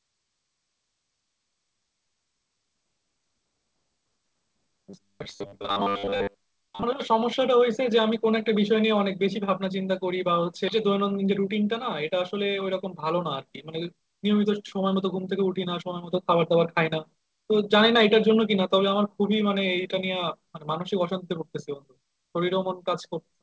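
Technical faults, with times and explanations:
4.85 to 6.83 s, robotic sound from repeated short buffers: speech becomes a rigid metallic buzz at 100 Hz, likely from a 10 ms buffer replayed over most of the stretch, unlike smooth speed-up.
10.68 s, skip ahead: playback jumps forward with no gap filled, losing roughly 0.7 s of speech, which shows as a sudden splice rather than a hurried passage.
10.82 to 14.00 s, jitter buffer speed-up: speech runs 7% faster at unchanged pitch as short pitch-period pieces totalling about 0.2 s are cut, sounding hurried, not buzzy.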